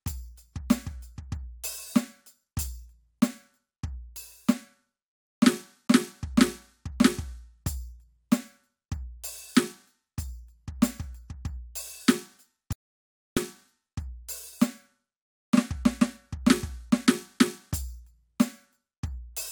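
At 12.73 s the music drops to dead silence for about 0.64 s, coming back at 13.37 s. It's an audio dropout to silence, likely a lost input where the recorder kept writing zeros. There's no room tone in the gap, and that stretch of music is simply gone.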